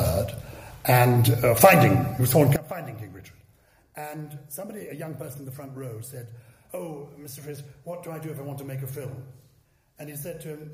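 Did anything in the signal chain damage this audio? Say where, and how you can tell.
Yes. One channel inverted, 2.56 s to the end: level drops about 20 dB, likely reversed wiring polarity cancelling shared content at mono summing.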